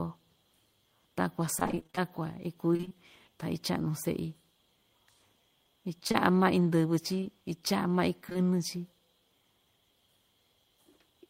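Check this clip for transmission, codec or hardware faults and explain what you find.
Two transmission faults are present, both from lost or late packets that the receiver concealed.

From 1.59 to 2.92 s there is repeated packet loss, giving a robotic sound. More than a dozen holes, the longest 27 ms, were patched by extending the previous sound, covering about a fifth of the stretch. The speech turns choppy. On a spectrogram this shows as smeared, repeated harmonic bands, and the waveform has regular stuttering blocks.

Between 6.08 and 8.45 s there are scattered short gaps. About seven isolated holes, none longer than roughly 20 ms, were each filled by continuing the last sound, so only a small share of the span is affected. They come through as brief ticks or hiccups in otherwise clear speech. A spectrogram shows thin vertical discontinuities, and the waveform shows small flattened or repeated segments.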